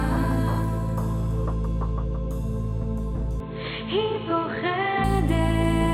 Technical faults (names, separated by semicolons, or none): input switched to a poorer device